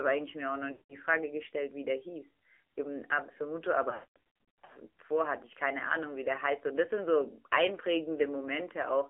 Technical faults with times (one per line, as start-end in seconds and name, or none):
0.00-9.09 AMR narrowband mobile codec
0.72-0.96 lost AMR speech frames
3.90-4.72 lost AMR speech frames